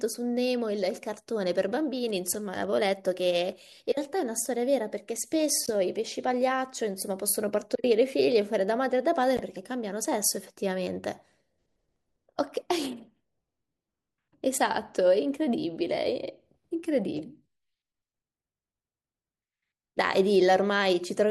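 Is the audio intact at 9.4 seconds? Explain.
No. From 9.37 to 9.41 s the speech drops briefly to silence, likely a Bluetooth dropout: about 14 ms of audio never reached the headphones, which fits a single lost packet. Unlike a stall or buffer underrun, the speech resumes as if it had played on, with nothing repeated or delayed.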